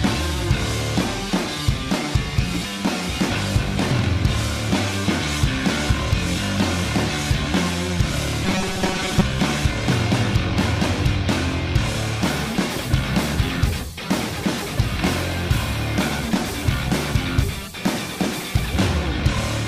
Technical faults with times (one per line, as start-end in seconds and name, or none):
8.45-9.24 robotic sound from repeated short buffers